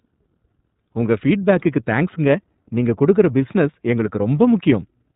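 Speech passes through the iLBC codec throughout. Nothing above 4 kHz survives. It sounds plainly rough and synthetic, fitting 30 ms frames at 13.33 kbps.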